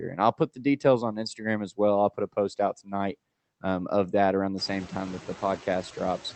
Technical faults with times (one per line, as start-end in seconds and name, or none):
0.00-6.36 noise suppressor artifacts
2.73-2.92 speech cut by the noise suppressor